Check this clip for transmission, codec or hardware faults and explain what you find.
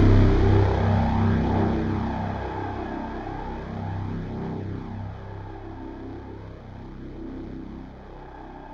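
One fault runs through the whole recording: channel delay, producing comb filtering. One channel arrives a fraction of a millisecond late, around 0.2 ms, and when the two are folded to mono, content shared by both cancels at regularly spaced frequencies, the first near 3 kHz. The sound turns thin and hollow, with a phasey, dulled top end. On a spectrogram this appears as fixed dark horizontal notch bands that stay put regardless of the material.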